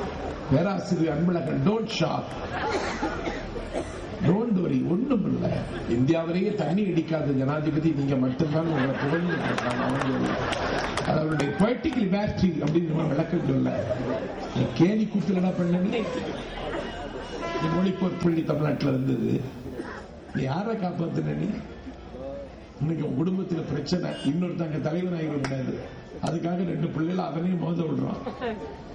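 Low bit depth with dither appears from 18.29 to 19.79 s. For that second and a half the signal is held to only 9 bits, and dither is added before each sample is rounded to those few levels. Rather than gritty distortion that follows the sound, the rounding error is spread into steady white noise, around 40 dB below the signal. It comes across as an even, constant hiss that starts and stops with the passage.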